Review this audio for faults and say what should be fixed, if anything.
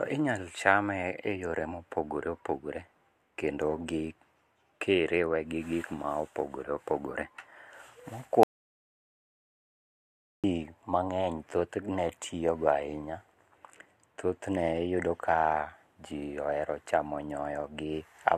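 At 8.43 s the speech cuts to an audio dropout to silence lasting 2.0 s, ending at 10.44 s. The gap is silent with no room tone, which likely means the input was lost while recording continued. Secure cables and monitor input levels live.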